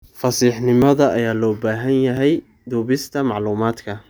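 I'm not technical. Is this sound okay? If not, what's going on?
No. The recording software likely fell behind and lost small chunks of sound, a fault called a dropped buffer (overrun). At 0.82, 2.17 and 3.33 seconds the speech jumps ahead by a tiny moment, heard as a slight skip.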